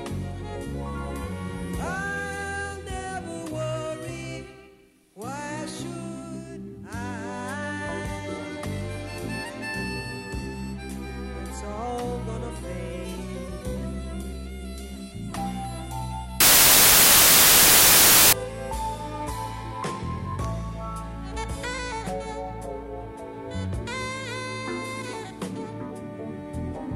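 Between 16.40 and 18.33 s the audio turns into loud, harsh broadband noise, a case of samples built from the wrong bytes: the reader misassembles each sample, so its rapidly changing low bits end up as the large part of the value. On a spectrogram this appears as a flat, bright band across all frequencies, and the waveform becomes dense and noise-like.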